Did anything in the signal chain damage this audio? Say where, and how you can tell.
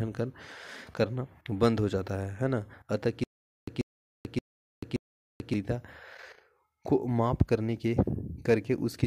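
Yes, there's a stutter with silent gaps from 3.24 to 5.54 s. A 137 ms burst repeats four times, each followed by 438 ms of dead digital silence, so it comes round every 575 ms. That's likely a playback or stream stall replaying its last fragment while the real audio gets dropped.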